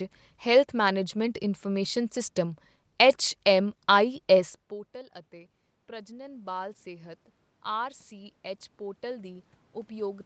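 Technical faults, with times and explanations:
4.69 to 7.15 s and 7.76 s to the end, automatic gain rising: Around 4.5 s the sound drops sharply, by about 20 dB, as the talker moves away from the microphone. The automatic gain control hears a quiet input and slowly turns its gain up. In the first span the level climbs by about 5 dB over roughly two and a half seconds. A second rise begins at 7.76 s. The room noise swells along with the voice, because the gain lifts everything together.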